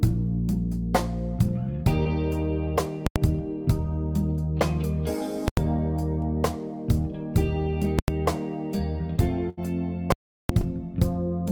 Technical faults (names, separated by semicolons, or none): short concealed packet loss; invalid numbers at full scale; burst of packet loss